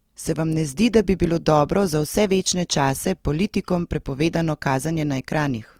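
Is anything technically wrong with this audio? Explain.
Yes. Throughout the speech there is plainly audible Opus compression damage, likely from encoding in Opus's music (CELT) mode at a low bitrate; the artefacts fit a rate around 24 kbps with full bandwidth retained. CELT preserves each band's energy but, short of bits, fills the finer detail by folding lower bands or injecting noise. The result here is a rough, grainy texture on tonal and harmonic parts of the speech rather than muffling or swirling.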